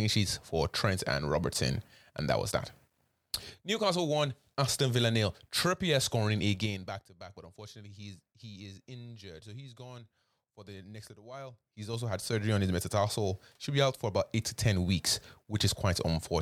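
Speech with zipper noise from 11.24 to 12.45 s. The level shifts by roughly 20 dB in unsmoothed 3 dB steps, about five per second, and each step clicks. The waveform envelope shows a staircase, and the spectrogram shows faint vertical lines.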